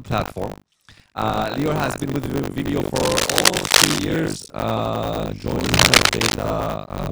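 Speech runs the whole way through with buffer tearing, a robotic buzz at 50 Hz that sounds only while there is signal. The writing and reading sides of the ring buffer have slipped against each other, so in every 20 ms period something like two-fifths of the buffer repeats audio from roughly 70 ms earlier, joined by hard edges at both ends. On a waveform those edges show as regular discontinuities every 20 ms, and a spectrogram shows vertical striping at that spacing with harmonic lines of the 50 Hz rate over the voiced parts. Cable scratch noise appears from 2.95 to 3.99 s and again from 5.61 to 6.30 s. It is heard as dense, uneven scratching laid over the speech and a little louder than it, likely from a worn cable, connector or control whose contact resistance jumped as it moved. A spectrogram shows these stretches as ragged broadband smears of irregular vertical flecks, and the waveform as jagged, spiky bursts that rise above the speech envelope.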